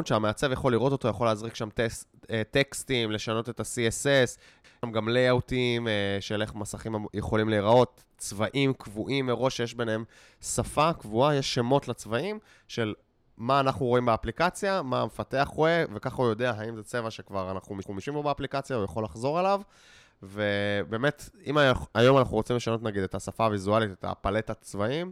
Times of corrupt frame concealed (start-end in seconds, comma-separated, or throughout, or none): none